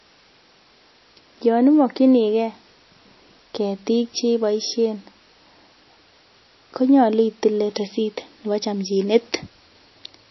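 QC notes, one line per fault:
Throughout: low-bitrate audio saved at a high bitrate. The speech sounds dull and swirly, with nothing above 5.8 kHz, so sibilants lose their crispness. This is likely a very low-bitrate MP3 that was later re-encoded at a much higher rate, which cannot restore what the first pass discarded. On a spectrogram, energy stops at a hard flat ceiling near 5.8 kHz across the whole clip, with smeared, blocky texture below it.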